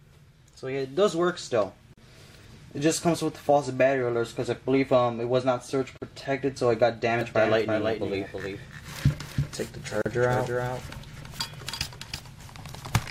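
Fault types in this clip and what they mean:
Gap at a join of encoded pieces: at 1.93 s, 5.98 s and 10.02 s, every 4 s, a silence of about 40 ms cuts into continuous sound. The pieces were encoded separately and joined untrimmed, so encoder start delay and final-frame padding remain, leaving smeared edges.
Doubled audio track: from 7.21 s to the end, a full-band copy of the sound runs about 300 ms behind, about 5 dB quieter, with no decay or room colour and an abrupt start. Its likely cause is a second, slower capture path mixed in.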